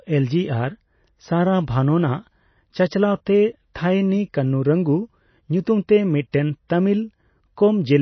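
Throughout the 8-second speech recording, nothing is heard above 6 kHz, and the remaining band has a watery, swirling texture with plainly audible MP3 compression damage. The likely cause is an encoder starved of bits, which fits a rate around 24 kbps. It cut the treble at a fixed point and dropped weak frequency lines that flicker on and off between frames. Unlike a simple low-pass filter, this also makes sibilants chirp metallically and blurs consonant onsets.

At 3.74 s and again at 6.32 s, a brief hiss runs just ahead of a sharp attack, spreading over about 16 ms and 19 ms. This is pre-echo. The transform block containing the attack spread its quantisation noise across its whole length, so noise sized for the loud onset leaked into the quiet moment before it. What separates it from the general swirl is its timing: the hiss arrives before the attack rather than after, and the onset itself sounds softened.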